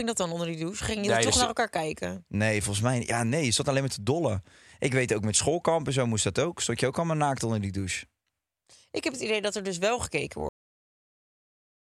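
The final stretch of audio was never written out or played, a cut-off end. At 10.49 s the speech stops mid-sound and falls straight to digital silence for the rest of the clip, with no natural decay or fade.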